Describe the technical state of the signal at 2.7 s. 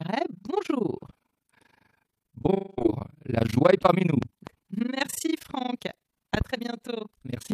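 At 2.7 s the stream has likely suffered a long network dropout: audio stopped arriving from 2.51 s to 2.79 s, and the receiver filled about 260 ms of the gap by stretching out the last speech it had instead of going silent. That fill is heard as a smeared, fading buzz in place of the real speech, and when normal audio resumes on "la joie est parmi", the original material from that stretch is simply gone.

Running through this moment, as through the whole clip, is overlap-add ripple. The speech was processed in overlapping windowed frames that were joined with a gain that doesn't stay constant across each overlap, so the level dips and recovers once per frame, at a rate of around 30 Hz. The swings are deep, about 60 dB, giving a hard, rough tremolo that chops the concealment buzz as well as the speech on either side of it.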